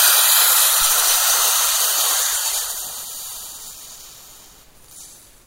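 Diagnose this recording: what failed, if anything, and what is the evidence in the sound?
Nothing failed, and there is no evidence in the sound of a fault at any stage of the recording.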